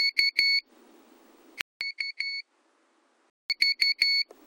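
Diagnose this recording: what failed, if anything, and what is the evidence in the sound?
From 1.61 s to 3.50 s the sound goes duller and noticeably quieter, with nothing above 10.8 kHz, a different low noise floor, and a 200 ms gap at the switch. That points at the driver or device stage, likely an input switched to a poorer device, before it switches back.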